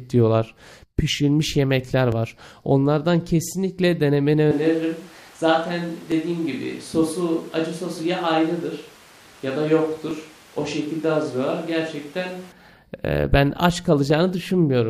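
At 2.12 s the speech skips slightly, and the same brief skip repeats at 6.12, 10.11 and 14.10 s, every 4.0 s. This is audio missing between chunks: a few milliseconds are likely dropped at each chunk boundary, and the two sides are butted together without any gap. From 4.51 to 12.52 s there is a switch to a distant microphone, likely because the close microphone's signal dropped out. The speech turns roomy and hollow with less low end, falls about 5 dB, and sits over room noise about 25 dB below it. Both changes are abrupt.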